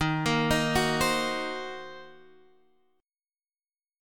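No technical faults can be heard anywhere in this clip. Nothing in the sound calls for comment from an audio engineering point of view.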